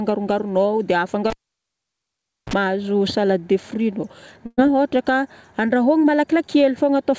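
Speech over a call line, with two clear problems. From 1.30 to 2.53 s there's a cable pulled and plugged in: a pop, about 1.18 s of near silence, then a 40 ms burst of 60 Hz mains buzz as the plug's tip touches first, and a second pop when the sound comes back. Then at 4.46 to 4.59 s a burst of packet loss hits. The receiver stretches the last sound for about 116 ms, fading it, and there's a 20 ms drop to silence. When the audio resumes, roughly 120 ms of speech is simply gone.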